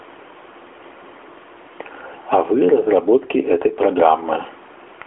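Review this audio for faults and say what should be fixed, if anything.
Input gain, likely set too high, makes a fast limiter clamp each loud moment of speech, so the gain swells and ducks around 10 dB: gain pumping throughout. Lowering the microphone gain so peaks sit well below the limiter threshold would prevent this.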